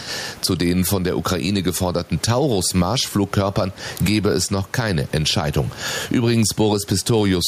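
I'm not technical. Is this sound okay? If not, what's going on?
No. The whole recording, from start to finish, has gain pumping. The level keeps dropping each time the speech gets loud, then rising again in between. Loud and soft parts end up closer together, so the speech sounds squashed. The likely cause is the microphone being turned up far too high, with an automatic control quickly pulling it back down. The room's background noise sits well below the speech.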